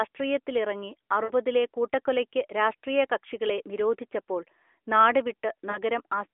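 Lost AMR speech frames at 1.24–1.32 s and 5.70–5.78 s: the decoder fills each gap, which fits three and then two 20 ms frames, by repeating the last good pitch and vocal-tract settings at falling gain. Through the narrowband phone-line sound, the speech briefly smears and dips before recovering.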